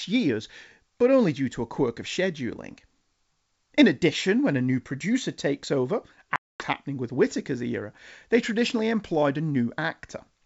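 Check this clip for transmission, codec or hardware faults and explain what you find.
One fault stands out: packet loss on an ADPCM call, from 6.36 s to 6.65 s. About 240 ms of audio, around ten packets, goes missing and is filled with silence. On a waveform this shows as a flat, hard-edged gap, and a spectrogram shows a clean vertical blank band. Because the decoder's adaptive predictor and step size drift away from the sender's during the gap, the speech resumes slightly distorted before resynchronising within tens of milliseconds. The G.722 wideband coding at 64 kbit/s carries the rest of the clip.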